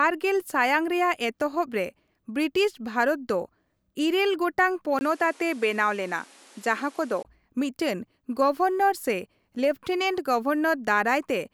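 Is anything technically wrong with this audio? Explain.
Yes. From 4.99 to 7.25 s, after a 20 ms gap, the speech loses everything above 12.6 kHz and gains faint background noise, likely from an input switched to a poorer device.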